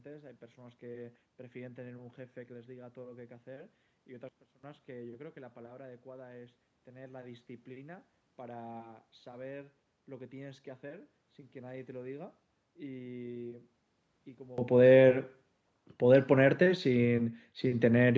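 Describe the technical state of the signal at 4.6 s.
At 4.6 s the speech sits inside a sudden gain jump from 4.29 to 4.63 s. The level drops about 17 dB and the noise floor falls with it, likely from an unramped gain change.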